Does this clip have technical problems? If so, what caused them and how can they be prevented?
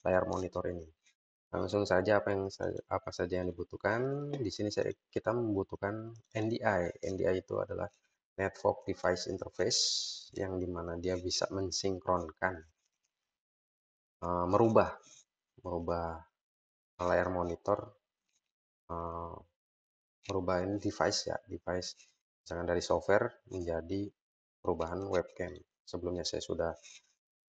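No, the signal holds steady throughout, with no audible technical faults and nothing that needs preventing.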